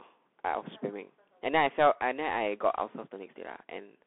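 Speech, and the whole clip has gone through a Bluetooth CVSD headset codec. The band is narrow, running from about 250 Hz to 3.5 kHz, and nothing is left above 3.8 kHz. The codec damage is plainly audible. CVSD sends one bit per sample, up or down, at a 64 kbps rate, which fits a 64 kHz sampling clock. Its step size adapts too slowly for loud, fast changes. S sounds come out scratchy, and a granular hiss sits under the speech.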